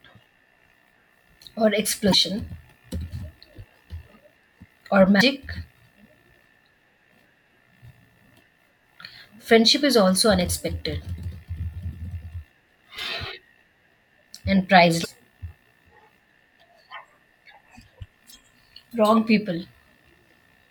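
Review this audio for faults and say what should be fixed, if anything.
Three short glitches break through the speech at 2.10 to 2.14 s, 5.17 to 5.21 s and 15.01 to 15.06 s, each lasting about 40 ms. They come from damaged data in the compressed stream: corrupted bytes make the decoder misread frames and lose sync until it finds the next valid frame header. Preventing this means carrying the stream over a checked, error-correcting transport and verifying file integrity with checksums before decoding.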